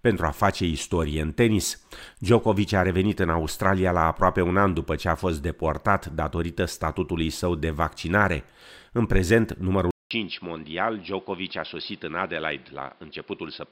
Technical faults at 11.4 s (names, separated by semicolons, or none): input switched to a poorer device